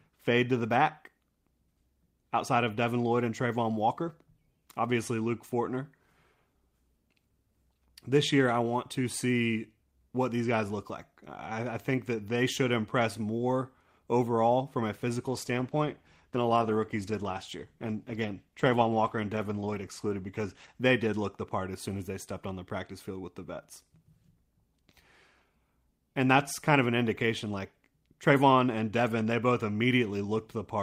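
Speech, with a call bitrate drop from 15.29 to 20.87 s, after "more overall from a" until "did look the part": coarser encoding roughens the sound, consistent with roughly 32 falling to 14 kbps.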